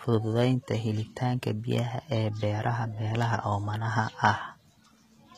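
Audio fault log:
Throughout, HE-AAC compression: the treble on this speech has a gritty, metallic edge, with s sounds coming out lispy and plainly damaged, and nothing at all above about 14.9 kHz. That's likely a low-rate HE-AAC encode, fitting something around 20 kbps. Only the lower band gets properly coded, and the top is faked by copying lower bands upward under a rough envelope, so the rebuilt highs don't line up harmonically.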